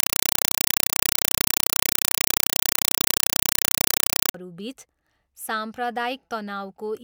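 From 0 to 4.34 s, loud, harsh chattering static replaces the speech, pulsing 31.25 times a second with bursts about 4 ms long and silence between them. This is a compressed stream played as audio. Dolby Digital (AC-3) data was passed straight through as if it were ordinary samples instead of being decoded, which fits a 192 kbps stream. Each encoded frame comes out as a short burst of noise followed by zero padding.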